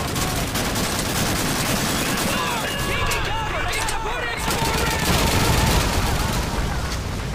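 The whole clip carries a doubled audio track: a clean copy trails about 0.7 s behind, roughly 5 dB quieter, likely from a slower second capture path or a misaligned edit.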